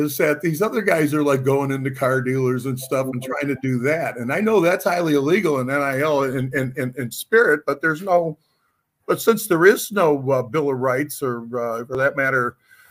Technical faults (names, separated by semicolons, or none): none